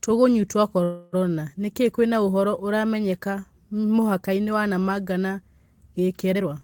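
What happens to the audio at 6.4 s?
From 6.35 to 6.48 s there is a jitter buffer speed-up: the receiver trimmed short pitch-period slices repeatedly to drain excess buffered delay, roughly 150 ms in total. The speech runs at about 215% speed without a pitch change, sounding abruptly rushed.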